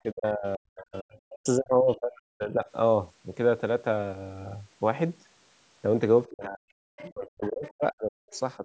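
A speech recording with two kinds of call-processing fault. The first is speech suppressed in double talk. The talker's voice is pushed down hard from 0.02 to 2.66 s and again from 6.3 to 8.27 s. The deepest dips reach roughly 40 dB, and the voice is affected for about two seconds and one and a half seconds of those spans. A brief, milder dip of about 10 dB follows at 8.57 to 8.64 s. The likely cause is an echo canceller that heard both sides at once, could not tell the talker from the loudspeaker echo, and turned everything down. The second fault is the other side's voice leaking through. Short scraps of a second voice appear at 0.94 to 0.99 s, 1.89 to 1.95 s, 6.97 to 7.1 s, 7.64 to 7.71 s and 8.31 to 8.4 s. They sit about 20 to 35 dB below the speech, loudest near 7.0 s. They are likely loudspeaker echo that the canceller failed to remove from the microphone. The audio has no content above 8 kHz, which fits the call's microphone path.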